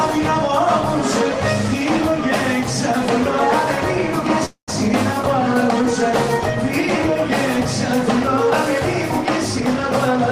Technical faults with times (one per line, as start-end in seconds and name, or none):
4.45-4.70 call audio freeze
9.55-9.68 jitter buffer speed-up